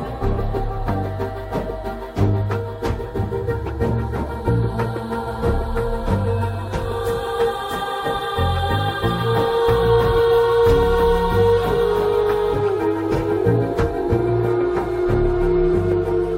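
At 12.52 to 12.56 s, compressed frames are skipped: the audio jumps ahead by roughly 0.7 s, which fits about fifteen missing frames of 46.4 ms.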